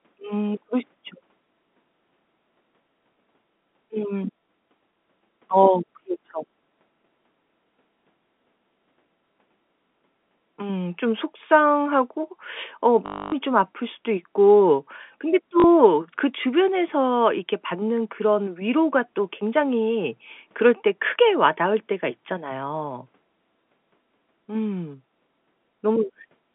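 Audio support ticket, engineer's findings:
Robotic stutter at 13.06–13.32 s (260 ms) and short buzz at 15.6–15.64 s (40 ms). Packet loss with last packet repeated: jitter-buffer concealment looping one frame; 50 Hz buzz fits 20 ms packets. Waveform shows identical blocks. Spectrogram shows frozen vertical slices, 50 Hz comb, within the G.711 line's 200 Hz–3.5 kHz band.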